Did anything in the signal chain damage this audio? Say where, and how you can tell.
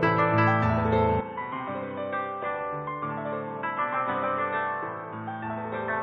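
Yes. From 1.21 s to the end, the sound turns dull and boxy. Nothing is heard above 3.8 kHz, and the level falls by a few decibels. A different, faint noise floor also appears. The change is instant, with no silence at the switch. This points to the capture stage at the driver level. The input was likely switched to a poorer device, such as a headset's call profile. That device passes a narrower band and has its own tone and noise.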